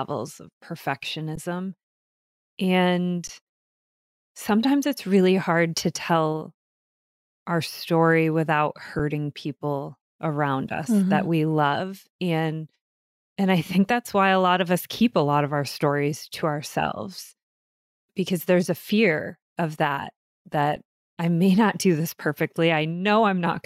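In this speech recording the output buffer ran empty four times, an underrun with held sample: the converter froze on its last value, halting the sound at 1.36 s and 3.28 s (16 ms each), at 8.99 s after "our story without", and at 20.76 s before "I may not do" (about 5 ms each, which fits a 256-sample buffer), then resumed where it stopped.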